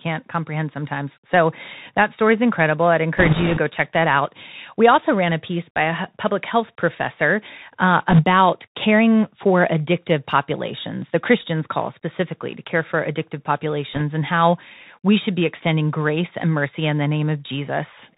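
Throughout, the speech passes through a Bluetooth CVSD headset codec, which sends only one bit per sample saying whether the waveform should step up or down, with an adapting step size. That fits a 64 kbps headset link. Everything above 4 kHz is gone, so the sound is thin and boxy. Louder high-frequency sounds outrun the step and distort, s sounds come out scratchy, and a granular hiss sits under the speech.

Bit errors on a Bluetooth voice link flip bits in that one-bit stream. Because every bit carries the same small weight and the codec's tracking recovers quickly, there are no loud clicks. Instead the speech gets a brief rushing, crackly noise. The first burst runs from 3.17 to 3.59 s, after "story is incredible I'd" and before "check that out". At an error rate of a few percent it is the roughest of the three. The second runs from 8.10 to 8.24 s, between "public health professor uh" and "caring for addictive populations". 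The third is a short, slightly lighter crackle from 13.94 to 14.02 s, between "to care for addictive" and "and how we should".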